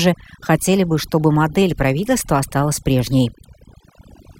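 Overdone noise removal runs throughout: heavy-handed suppression gates out frequency bands near the noise floor, quiet speech detail included, leaving glittery specks over near-silence.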